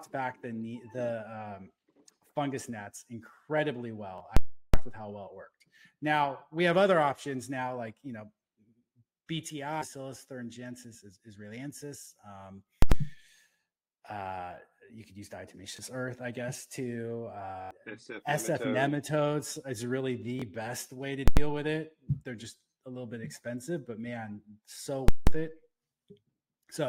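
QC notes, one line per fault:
4.18–4.20 s, 15.77–15.79 s, 17.62–17.71 s, 20.40–20.42 s: repeated buffer. New audio arrived late, so the last block of about 21 ms (which fits a 1024-sample buffer) played again. Each repeat has a hard join. The single repeats sound like a short stutter. At 17.62 s the block plays four extra times, giving an audible stutter and dropping roughly 100 ms of audio. Real sound is repeated here, unlike the full-scale faults.
4.37–4.74 s, 12.82–12.92 s, 21.28–21.37 s, 25.08–25.27 s: invalid numbers at full scale. A calculation produced invalid values, which pinned the output at one extreme for blocks lasting about 370, 93, 93 and 186 ms. Each block gives a very loud pop at its start and end with nothing between. No material repeats.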